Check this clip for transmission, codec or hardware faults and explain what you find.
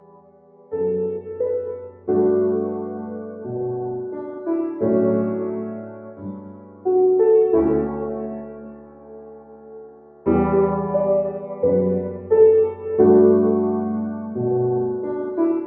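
There is one processing fault here: a speech noise suppressor was left running on non-speech audio. It shows up throughout and as four distinct dips. The call microphone path itself works as expected and passes nothing above 8 kHz.

Noise suppressor applied to music or sounds: this runs through the whole clip. The suppressor is built for speech, so it treats steady tones, ambience and reverb as noise. It keeps pushing them down, by around 10 dB at most. Onsets get through, but anything sustained sinks. The level pumps and flutters, and the sound thins out.

Sound cut by the noise suppressor: four stretches are pulled down harder than the rest. They fall at 0.0 to 0.73 s, 1.9 to 2.08 s, 5.77 to 6.86 s and 8.34 to 10.27 s. The deepest drop is about 10 dB, and about 8 dB in the short dip near 2 s. In each stretch the suppressor misread held or decaying sound as noise. Levels sag and tails are cut short, while sharp attacks survive.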